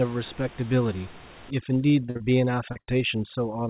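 From 1.50 s to the end, there's overdone noise removal. The room hiss, sitting about 21 dB under the speech, gets pushed down and breaks up into little twinkling specks, and quiet parts of the speech are clawed away along with it.

Right inside that stretch, a cluster of packet trouble starts. At 2.06 to 2.10 s there's a short concealed packet loss: about 20 ms never arrived, so the receiver carried the last sound forward and blended back, which comes across as a quick smear.

It runs straight into a burst of packet loss from 2.10 to 2.17 s, with roughly 60 ms gone. The receiver keeps extending the previous sound while fading it, so you get a brief held buzz or fading hiss, then the audio picks up further along with that bit missing.

Another short concealed loss follows at 2.17 to 2.22 s, and one more at 2.72 to 2.77 s covering about 40 ms. Each is a small smear or wobble where the gap got papered over.

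Then a second burst of packet loss hits at 2.81 to 2.89 s, again about 60 ms lost, with the same fading held sound and a jump ahead when real audio returns. Through all of this, nothing sits above 4 kHz, which fits the G.711 call codec's narrow band.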